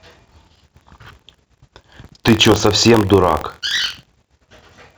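A robotic buzz of about 47 Hz rides on the speech throughout, present only while there is signal. This is buffer tearing: writer and hardware cross inside each period, splicing a small slice of audio roughly one lap old into every buffer, which fits a 1024-sample buffer.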